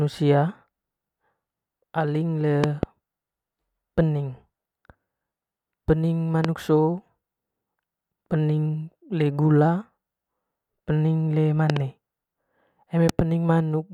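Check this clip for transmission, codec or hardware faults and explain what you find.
Four bursts of loud pops stand out over the speech. Each is a transient about 20 dB above the speech level, most likely a voltage pulse from a plug, switch or static discharge that is shaped by the circuitry after it.

At 2.64 to 2.85 s, just after "aling le", two thumps come in quick succession. At 6.45 to 6.47 s there is a single short pop. At 11.70 to 11.79 s, right after "pening le", there is another pair. At 13.09 to 13.21 s comes a final double pop.

What separates these from dropouts or codec glitches is that the speech carries on unbroken beneath each pop, with nothing missing or smeared. The pops are layered on top of the sound instead of replacing it.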